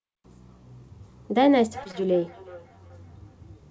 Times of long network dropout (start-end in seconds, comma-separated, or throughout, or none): none